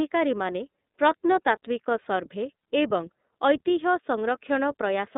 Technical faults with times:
0.00-5.17 iLBC codec
2.60-2.63 lost iLBC frames

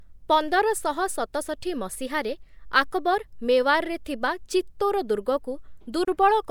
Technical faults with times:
6.05-6.07 gap at a join of encoded pieces

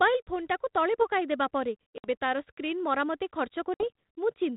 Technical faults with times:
1.98-2.07 packet loss on an ADPCM call
3.74-3.89 packet loss on an ADPCM call

